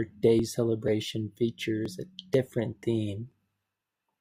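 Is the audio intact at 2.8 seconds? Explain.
No. At 2.83 seconds there is a brief skip in the speech. A very short piece of sound, roughly 15 ms, is missing. The sound on either side is butted together with no gap of silence, so the flow jumps forward slightly. This is likely audio missing between chunks. The recording appears to be handled in 0.5-second blocks, and a sliver was lost at the handover from one block to the next.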